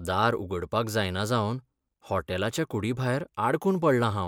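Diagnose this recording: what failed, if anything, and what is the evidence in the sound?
Nothing failed; no stage shows any audible trouble.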